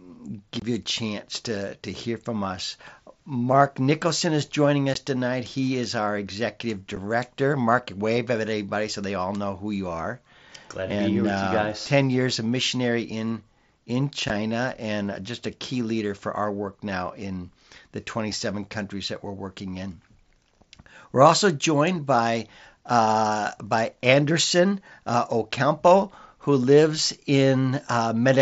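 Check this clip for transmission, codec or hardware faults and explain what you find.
There are four brief dropouts from unconcealed Bluetooth headset packet loss, on a link carrying wideband mSBC speech. Voice packets between headset and phone went missing and were replaced by silence or an idle pattern, with nothing to mask the holes. The first gap runs from 0.60 to 0.62 s, about 22.5 ms, which fits three lost packets, just before "you a chance to". Shorter gaps of about 15 ms follow at 4.94 s after "is joining", about 7.5 ms at 6.96 s, and about 15 ms at 14.28 s between "a missionary in in" and "and just a key". Each one cuts the speech with hard edges that can tick.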